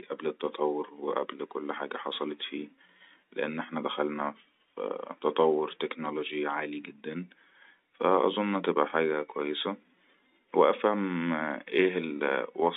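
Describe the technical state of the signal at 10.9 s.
At 10.9 s the audio is intact, with no fault, just the narrow telephone band of the G.711 line coding, roughly 200 Hz to 3.7 kHz, and its faint level-following hiss.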